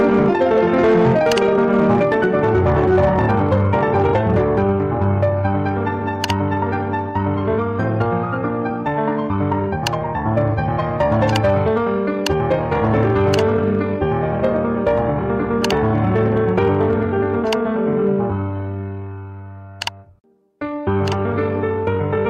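A stage in the chain received a signal about 11 dB hotter than it could pass, so from start to finish the loudest peaks are sliced flat: hard clipping. Only a small share of the waveform, on the order of one or two percent, runs into the ceiling, but each flattened top sprays harmonics high into the spectrum. The result is a gritty crackle riding every peak, edging toward harsh fuzz on the loudest moments.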